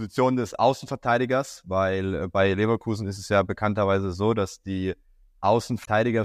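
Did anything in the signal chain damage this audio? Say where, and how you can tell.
Yes. The damage sits in the codec stream, as damaged data in the compressed stream. From 5.81 to 5.88 s a brief glitch cuts into the speech. Corrupted bytes made the decoder misread those frames, lose sync and hunt for the next valid header.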